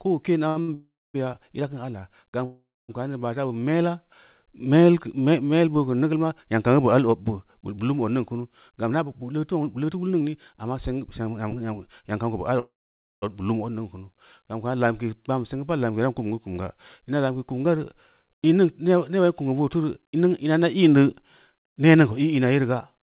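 Two short stalls from late packets come first, at 0.48 to 0.58 s and 0.62 to 0.70 s. Each time a packet arrived late, the receiver held the current sound for 76 ms and then 60 ms before resuming. On a spectrogram the harmonics run flat and smeared. The waveform shows a repeated, slightly decaying cycle.

A call audio freeze follows from 0.74 to 1.16 s, a 402 ms gap. Its likely cause is packets held up in transit, which left the jitter buffer empty. The last sound buzzes and fades, then 260 ms of near-silence shows as a flat waveform and a blank spectrogram band before the audio resumes where it stopped.

From 1.28 to 3.83 s a jitter buffer slow-down stretches the audio to 98% speed. It adds 66 ms by repeating single pitch periods. Pitch is unchanged, but sounds are drawn out. The spectrogram shows slightly elongated harmonic stretches with no shift in frequency.

A second call audio freeze, from 2.45 to 2.91 s, inserts 438 ms, likely from delayed packets emptying the buffer. 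A fading buzz gives way to 250 ms of silence, seen as a dead flat stretch in the waveform.

A jitter buffer speed-up runs from 5.9 to 10.37 s at 105% speed. It trims roughly a fifth of a second of pitch periods to shrink an oversized buffer, so the speech sounds hurried at unchanged pitch. Syllables look compressed in time, and harmonic spacing is unaltered.

The longest call audio freeze spans 12.59 to 13.24 s, 628 ms in all. It was likely caused by another run of late packets. A brief fading buzz leads into 520 ms of silence, a wide blank gap on both displays. Throughout, the narrowband call path leaves nothing above 4 kHz, which fits G.711 mu-law.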